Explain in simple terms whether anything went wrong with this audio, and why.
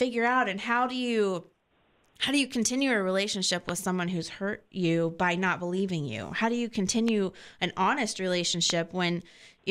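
Three loud pops cut through the speech at 3.69–3.71 s, 7.08–7.10 s and 8.70–8.72 s, with the talking continuing underneath. The likely cause is a brief electrical glitch. The first lands after "you continue a relationship", the others around "an honest".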